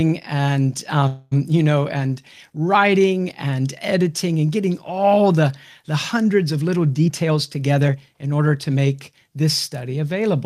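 A speech recording with two timing faults. From 1.07 to 1.34 s, just before "you know", a call audio freeze stretches the last sound into a fading buzz for about 240 ms, ending in a brief silence. It most likely comes from delayed packets emptying the jitter buffer. On a spectrogram it shows as smeared, flat harmonics. From 7.06 to 8.79 s, after "the hundreds of little", a jitter buffer speed-up plays the audio at 114% speed with unchanged pitch, trimming roughly a third of a second. The waveform shows packed syllables, and the harmonic spacing stays the same.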